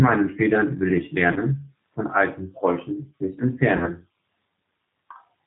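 G.729 coding runs through the whole clip, which fits an 8 kbit/s G.729A stream. The speech is rebuilt from a vocal tract filter, a pitch predictor and a few pulses per frame, with nothing above 4 kHz. The result sounds plainly rough and synthetic, with a dull top end.

VoIP packet loss concealed by the speech codec occurs at 1.32 to 1.41 s and again at 3.77 to 3.93 s. Each gap fits two lost packets, about 40 ms of audio. The decoder stretches its last pitch and filter with falling gain, so the sound smears into a fading buzzy tone or coloured noise. The speech stays weak and distorted after packets resume.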